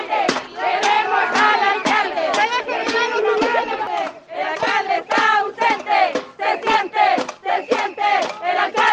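A DC step occurs twice, at 3.43 s and again at 6.71 s: the waveform's zero line jumps by about -32 dBFS, heard as a brief low thump, then drains away at a rate consistent with a 20 Hz high-pass. The audio continues unchanged through both events.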